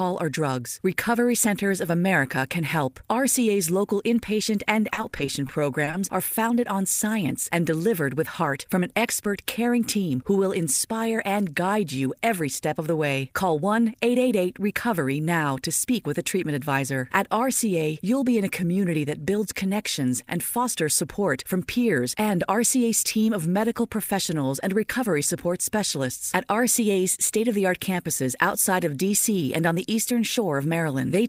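From 4.93 to 5.95 s, just after "local inpatient and", the speech breaks up with repeated packet loss and takes on a robotic sound. Eight short gaps fall within about one second, the longest 40 ms. Each gap is covered by stretching the last sound forward, using 190 ms of filler in total while 140 ms of real audio is missing. About 19% of the stretch is patched this way, so the speech sounds choppy, with pieces missing.

From 20.57 to 21.36 s, between "that builds connections and" and "from peers and", a jitter buffer speed-up occurs. The receiver had built up more delay than it wanted. To shed it, it cut out tiny slices of one or a few pitch periods, about 40 ms in all. The speech runs at 104% speed with its pitch unchanged, just under the rate at which speech starts to sound hurried.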